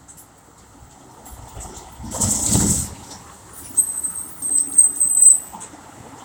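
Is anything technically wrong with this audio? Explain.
No, nothing technically wrong turns up here; the audio just sounds the way it should all the way through.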